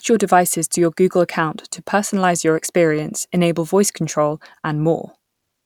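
No technical faults can be heard anywhere in the speech recording, with the signal continuous and intact throughout.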